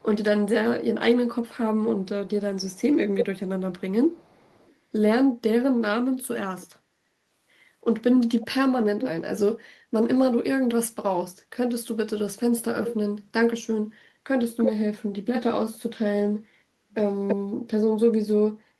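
Echo leak appears at 0.0–0.05 s and 1.34–4.75 s as a faint copy, then much louder at 8.41–9.1, 14.57–14.7 and 17.27–17.36 s, trailing the speech by 333 ms. It is likely an incompletely cancelled loudspeaker echo, seen on a spectrogram as ghost harmonics shifted later in time.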